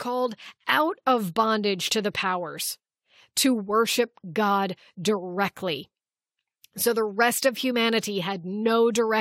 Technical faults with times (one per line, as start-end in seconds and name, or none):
none